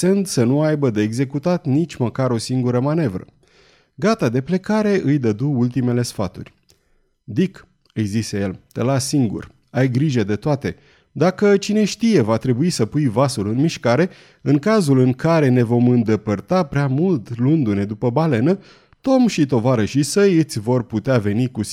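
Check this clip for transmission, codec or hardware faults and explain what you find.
Three isolated clicks occur in the speech, at 2.69 s after "executat nici măcar o", at 9.43 s between "zise el te las" and "ai grijă de toate", and at 18.26 s. Each is a single sharp tick with a thin vertical line across the spectrum. The likely cause is dropped samples: a tiny fraction of a millisecond of the stream goes missing, so the waveform jumps abruptly to a later value. Unlike a dropout, no audible sound is removed.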